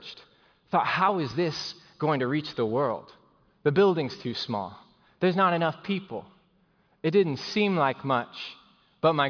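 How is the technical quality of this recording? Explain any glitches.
The recording's technical quality holds up, with no glitches to explain.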